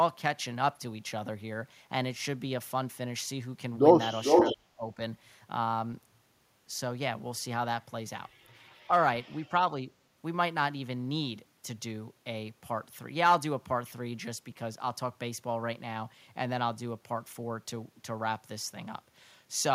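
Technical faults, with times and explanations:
4.24 to 4.55 s, echo leak. A delayed copy of the speech comes back about 448 ms late, at roughly the same level as the speech itself. It is short. The likely cause is a loudspeaker on the far side feeding its microphone. That side's echo canceller failed to remove the pickup. The leftover was sent back down the line, so the clip briefly carries its own repeat.
4.52 to 5.0 s, speech suppressed in double talk. The speech dips sharply, by as much as roughly 30 dB at its deepest. The drops add up to about four tenths of a second. This overlaps the end of the echo. The likely cause is an echo canceller that heard two sources at once and could not tell the talker from the echo. It turned both down.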